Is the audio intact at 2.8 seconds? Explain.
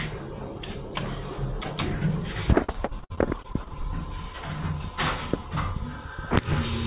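No, 2.8 s falls inside a stretch of repeated packet loss (robotic sound) running from 2.64 to 3.85 s. Packets kept going missing, and each hole, the longest about 58 ms, was patched by stretching the previous sound, so about a quarter of that span is patched and the stretch sounds choppy.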